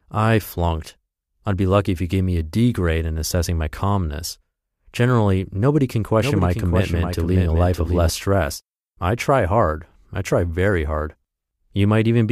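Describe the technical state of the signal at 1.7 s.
At 1.7 s the speech signal is intact, with no technical fault present at that moment.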